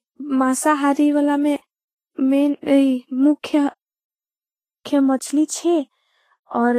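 Throughout the speech, the treble is hissy and grainy, and nothing is heard above 14.2 kHz. Consonants smear and tones sound rough. This is likely Vorbis compression at a low bitrate, around 23 kbps. Fine high-frequency detail is coarsely quantised into noise.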